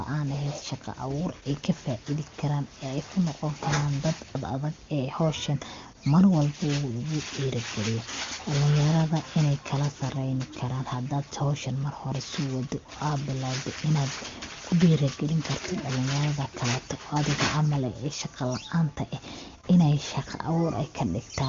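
No technical faults occur in this speech, which is carried by the AMR wideband (HD Voice) codec at 23.85 kbit/s with no content above 7.3 kHz.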